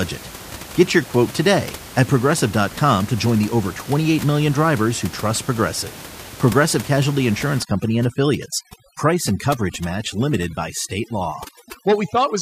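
From 7.63 s to the end, overdone noise removal strips frequency bands sitting near the room noise, so the background collapses into twinkling specks.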